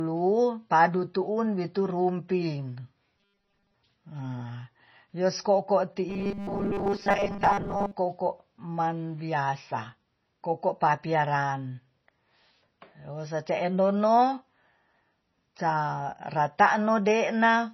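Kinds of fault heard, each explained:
MP3 compression: The whole recording sounds watery and swirly, likely from heavy MP3 encoding at a low bitrate, around 24 kbps. A spectrogram shows speckled gaps where weak frequency lines drop in and out.
Robotic sound from repeated short buffers: From 3.17 to 3.75 s and from 6.09 to 7.92 s, the speech turns into a rigid, metallic 200 Hz buzz, likely from a 5 ms buffer being replayed while most of the real audio is skipped. The waveform shows identical short cycles.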